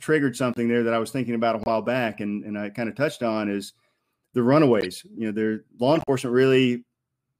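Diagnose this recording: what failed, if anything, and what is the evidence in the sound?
Corrupt frame decoded, at 0.54 to 0.58 s (just before "there that I was"), 1.63 to 1.70 s (between "was thinking about a" and "back and and I"), 4.81 to 4.86 s, and 5.95 to 6.09 s (after "know their law"). This is a codec-stage fault. Each is a short burst of misplaced energy peaking around -15 dBFS, or about -25 dBFS in the first. Damaged bits in a few consecutive compressed frames were decoded anyway, scattering wrong spectral content for each frame's duration.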